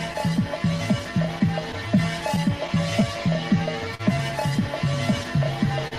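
Slight hiccups and an unsteady pace run through the whole audio, the sign of clock drift between sender and receiver, with the sender's clock running roughly 3% slow. From 0.13 to 4.01 s, around seven brief ticks or smears appear, the longest about 40 ms. These are scattered short gaps, where late or lost packets were patched by continuing the previous sound, with nothing actually missing. Between 0.29 and 5.4 s, the tempo drags slightly, running at 99% speed. These repeated timing corrections stretch short pieces, adding around 50 ms in total, so the receiver stays in step with the slow sender. At 5.88 to 5.93 s, a sound is held too long. This is a short stall from a late packet: the buffer ran empty and 38 ms was filled by extending the last sound, with nothing lost.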